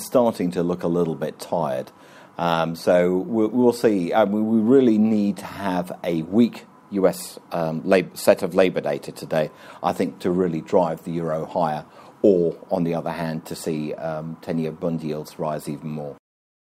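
No technical faults can be heard anywhere in the audio.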